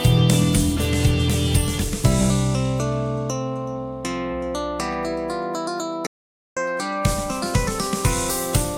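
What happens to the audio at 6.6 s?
An audio dropout to silence runs from 6.07 to 6.57 s, so at 6.6 s the music is just returning. For about half a second the input was likely lost, through a failed link or device, while recording continued writing silence: the music cuts off into dead silence with no room tone, then resumes mid-flow.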